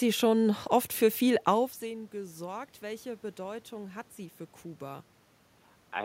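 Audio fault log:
No system faults found; the room noise and the level shift around a second and a half, as the talker moves relative to the microphone, belong to the recording itself.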